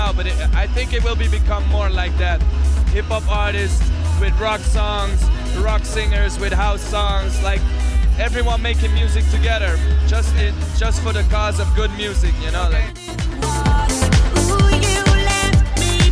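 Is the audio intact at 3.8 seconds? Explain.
Yes, at 3.8 seconds the audio is intact, with no dropout, click, distortion or other fault to be heard at that moment.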